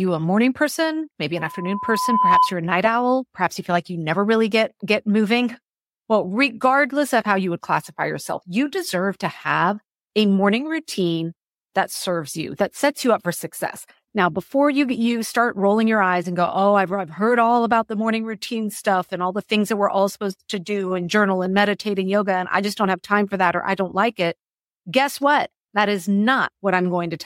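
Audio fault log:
1.37–2.55 s, loudspeaker feedback squeal: a steady 1 kHz tone swells over about a second into a squeal, ending up roughly 5 dB above the speech. The microphone was picking up its own loudspeaker, and at that frequency the loop gain exceeded one, so the tone fed itself.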